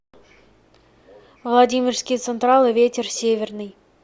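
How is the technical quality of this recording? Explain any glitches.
No glitches or faults heard.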